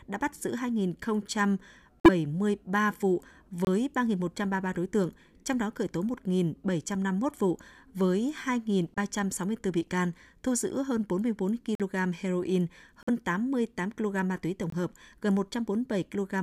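Speech with corrupt frame muting: abrupt silent holes at 2.00–2.09, 3.65–3.67, 8.94–8.98, 11.75–11.81, 13.03–13.09 and 14.70–14.74 s, where damaged compressed frames were rejected and replaced with silence, timing intact.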